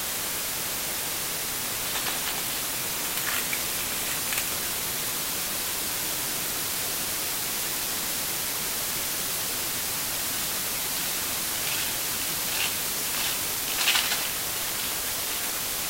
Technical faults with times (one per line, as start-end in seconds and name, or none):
0.00-15.89 low bit depth with dither